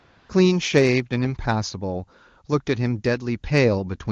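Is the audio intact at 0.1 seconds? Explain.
No. From the start to about 0.29 s you're hearing AMR comfort noise. The phone decided nothing was being said and sent no speech frames, so the receiver fills that stretch with a steady, smooth synthetic hiss built from a rough sketch of the background level and spectrum.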